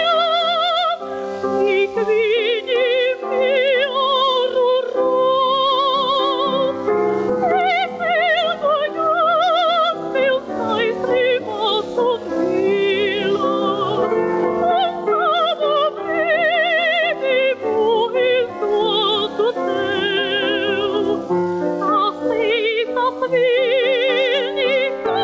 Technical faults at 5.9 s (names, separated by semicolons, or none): gain pumping